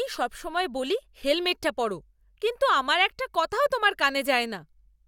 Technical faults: none

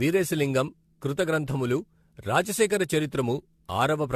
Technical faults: generation loss

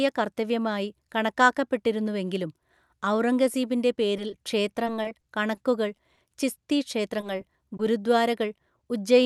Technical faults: scattered short gaps; short concealed packet loss

